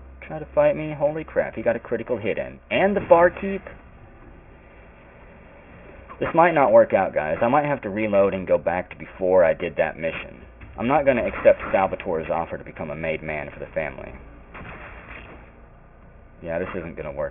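Aliasing runs through the whole clip. Content above 3 kHz folds back below it, which fits a drop from 48 kHz to 6 kHz without a low-pass filter first. Sibilant, high sounds turn gritty and metallic, with the folded energy about 20 dB below the signal. On a spectrogram, mirrored traces climb hard against a sharp 3 kHz ceiling.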